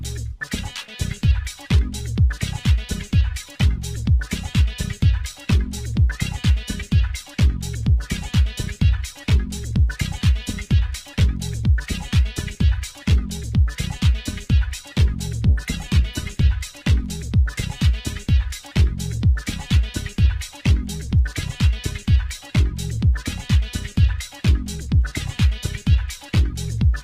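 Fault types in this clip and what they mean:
call bitrate drop: from 15.47 to 16.59 s the sound turns rougher and more coarsely coded, consistent with a fall from about 32 to 17 kbps; spectrogram detail looks grainier there.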